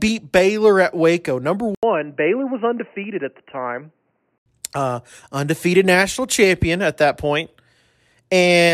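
From 1.75 s to 4.46 s the speech turns dull and boxy, with nothing above 3 kHz, faint new background noise and an 80 ms gap at the switch. This is likely an input switched to a poorer device. The changed noise and the gap distinguish it from a simple filter. The switch comes just before "uh undefeated national champion", and full clarity returns at 4.46 s.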